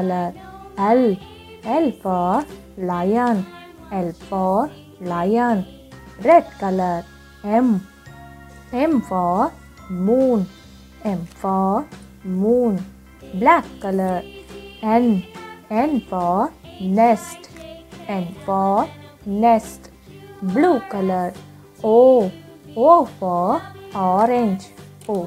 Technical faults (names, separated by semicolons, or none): none